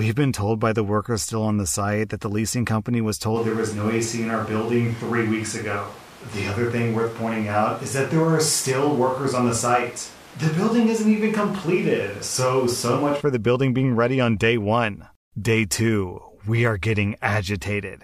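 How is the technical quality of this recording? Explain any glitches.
The recording has one clear fault in its sound quality. From 3.37 s to 13.20 s the speech turns roomy and hollow, with thinner bass. The change in and out is abrupt. This is likely a switch to a distant microphone, with the close microphone's signal missing. A far microphone captures more room reflection and less low end. The level barely changes. Background noise rises but stays roughly 25 dB below the speech.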